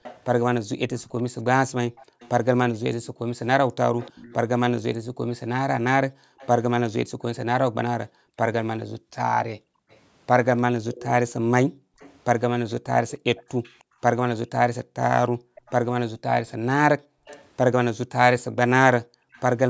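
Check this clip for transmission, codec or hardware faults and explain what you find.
Two faults run through the speech: an echo returning from the far end, and room sound being cut back by an echo canceller.

Echo leak, 0.03 to 6.48 s and again 9.91 to 19.42 s: a faint copy of the speech trails 303 ms behind, about 20 dB down, likely a loudspeaker echo the far-end canceller failed to remove.

Background gated by the echo canceller, 2.05 to 19.32 s: the room sound dips, by up to about 40 dB and for roughly 3 s in total, as the canceller clamps the microphone while its loudspeaker plays. The call's microphone processing is also audible, with nothing above 8 kHz.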